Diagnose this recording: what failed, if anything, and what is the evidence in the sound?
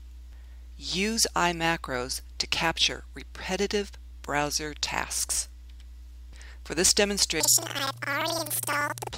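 A sample-format conversion fault: from 7.40 s to the end at 9.17 s, the audio jumps an octave high with an 11.7 Hz flutter. This is planar audio read as interleaved: each 85.33 ms block, which fits a 4096-sample block, plays left then right at double speed. Unlike a sample-rate mismatch, overall pace stays correct.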